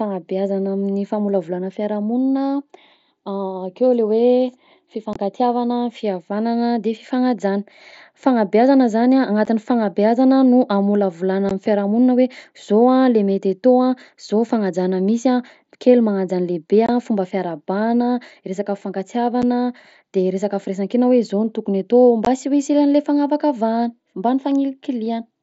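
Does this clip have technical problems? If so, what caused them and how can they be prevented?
Yes. Unconcealed Bluetooth headset packet loss occurs at 5.13–5.16, 9.45, 11.49, 16.86–16.89, 19.42 and 22.25 s. The wideband mSBC link dropped stretches of 7.5 to 22.5 ms, consistent with one to three lost packets. Silence or an idle pattern replaced them, leaving abrupt holes in the speech. Keeping the headset near the phone and away from 2.4 GHz interference, or enabling packet loss concealment, would prevent this.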